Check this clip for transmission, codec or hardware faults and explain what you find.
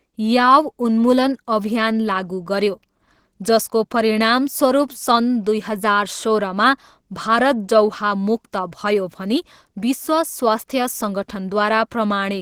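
There is one fault, present throughout the speech: Opus compression, likely at a rate in the region of 16 kbps. The sound points to the encoder running in hybrid mode, where the lower band is coded as speech and the upper band is filled from band energies rather than exact detail. The damage is plainly audible: the speech comes across muffled, hoarse and grainy, while the band still extends to about 20.3 kHz.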